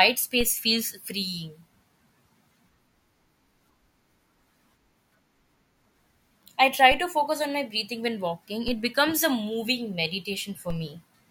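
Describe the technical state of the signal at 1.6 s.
At 1.6 s the speech signal is intact, with no dropout, distortion or other fault.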